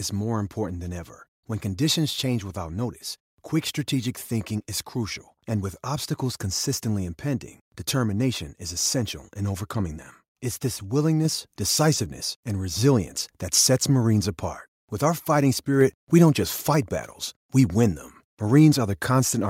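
At 11.25 s, just before "decisiveness and resilience that", the microphone volume steps up: the call software judged the input too quiet and raised the device gain by about 4 dB at once. Voice and background noise jump together, visible as an abrupt step in waveform envelope and spectrogram brightness.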